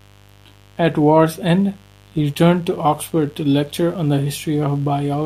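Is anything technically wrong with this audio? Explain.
Yes. Mains buzz runs through the whole speech clip, sitting roughly 30 dB below the speech. Sharp switching spikes on the 50 Hz supply leak into the signal twice per cycle, spreading harmonics up into the kilohertz range. The result is a steady, raspy buzz under the speech.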